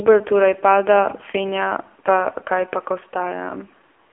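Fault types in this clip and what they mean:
AMR narrowband mobile codec: The speech went through the AMR-NB phone codec. It rebuilds sound from a vocal-tract model fed by sparse pulses. Nothing above 3.6 kHz survives. The band sits near 300 Hz to 3.4 kHz. Heavy buzzy, synthetic damage fits a low 6.7 kbps mode.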